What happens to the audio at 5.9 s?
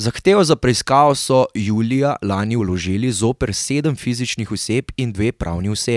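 At 5.9 s the speech runs through intact, with no audible fault at that moment.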